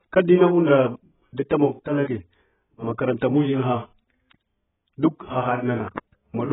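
Throughout, the speech is dull and smeared, with nothing above 3.8 kHz and a warbling texture: likely heavy AAC compression, which fits a bitrate near 10 kbps.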